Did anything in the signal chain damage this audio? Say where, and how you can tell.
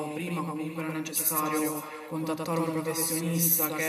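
Yes. Throughout the clip, every sound arrives twice: a full-band copy follows about a tenth of a second behind, roughly 5 dB quieter, with no decay or added room colour. This doubled audio track most likely comes from the signal being captured a second time over a slower path, or from an edit holding two copies out of step. On a waveform each burst has a slightly smaller twin offset by about 100 ms. A spectrogram shows every onset repeated at identical frequencies.

A second fault is echo with no canceller, introduced at the call-processing stage. Across the whole clip, the speech returns around 400 ms later at about 12 dB below the original, and it sounds thinner than the direct signal. The far end's loudspeaker is feeding its microphone, and no echo canceller removes that path before the sound travels back over the network. A spectrogram shows faint shadows of each syllable trailing well behind it, with weaker highs.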